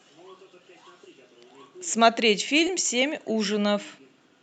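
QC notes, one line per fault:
2.67–2.71 s, short concealed packet loss: about 20 ms of the call arrived too late to decode, and the receiver covered the gap by extending the preceding sound for roughly 12 ms before crossfading back into real audio. It is a brief smear, not a hard dropout to silence or a click, because the gap holds a continuation of the sound rather than nothing. Audio above 8 kHz is cut by the call codec.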